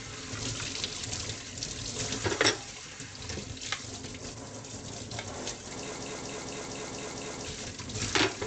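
Throughout, the sound is dull above 8.3 kHz and plainly watery and swirly, likely MP3 compression at a rate near 47 kbps; a plain low-pass filter would not warble like this. From 5.96 to 7.46 s, a 0.23 s fragment repeats exactly seven times back to back, a broken-record loop from a likely stalled player or stream. Unlike a skip or dropout, identical material recurs while the audio that belonged there is lost.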